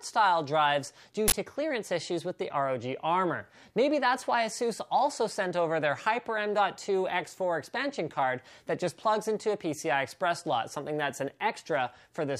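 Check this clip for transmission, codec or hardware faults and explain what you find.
One fault is audible. Uninitialised buffer, 1.28 to 1.32 s: a 40 ms block was played out before any audio had been written into it, so whatever stale values sat in that memory were treated as samples, producing a brief, loud burst of harsh digital noise.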